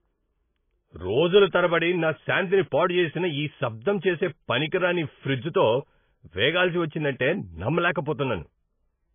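From start to finish the speech is heavily damaged by what is likely MP3 compression. Nothing is present above 3.5 kHz, because the encoder has cut the treble at a fixed point to save bits. That dulls the sibilants and leaves the sound muffled. Weak frequency lines drop in and out between frames, giving a watery, swirling texture with metallic chirps on s sounds and smeared consonant onsets. The damage points to a very starved bitrate, around 18 kbps.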